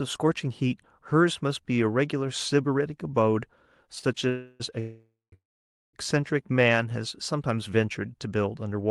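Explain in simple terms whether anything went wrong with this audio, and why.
Around the 4-second mark the speech starts to hiccup. First there's a short stall from a late packet at about 3.99 to 4.05 s. A bit of audio didn't arrive in time, so the receiver held the last sound for an extra 40 ms until it showed up, then carried on from the same spot. You hear a sound hang on slightly too long, maybe with a faint buzz, but nothing actually goes missing.

Then come three call audio freezes, close together: 4.29 to 4.62 s, 4.80 to 5.34 s, and 5.34 to 5.95 s. Each time the audio stops moving forward and the last sound is stretched into a fading buzz. The first lasts about 0.3 s and stays audible throughout. In the second, roughly the last 0.18 s drops to silence. The third is almost entirely silent, about 0.54 s of its 0.59 s. The likely cause is packets getting held up on the network so the buffer ran dry. 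When they arrive the speech picks up where it left off, so these are added gaps rather than lost audio.

Finally, from 6.52 to 7.03 s there's a jitter buffer slow-down. After all that waiting, the receiver rebuilds a little reserve by repeating tiny slices of the sound. Speech runs at about 88% speed there, adding 67 ms. The pitch stays the same, but the speech sounds drawn out, perhaps with a slight warble.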